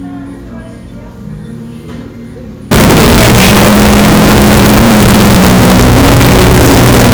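Signed and unsigned mixed up, from 2.71 s to the end of this everyday sound recording: the audio abruptly turns into very loud, harsh distortion, and quiet stretches come through as loud as everything else. The likely cause is 16-bit samples being read with the wrong sign convention, which flips the top bit, so every zero crossing becomes a leap from one end of the range to the other.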